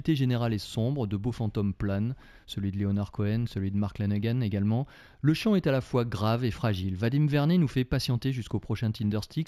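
Speech, with imaging from linear upsampling throughout. Content stops near 8 kHz and a faint mirrored copy, roughly 35 dB below the signal, fills 8 to 16 kHz. This points to 16 kHz material raised to 48 kHz by straight-line interpolation, which dulls the top end and adds metallic shimmer on sibilants.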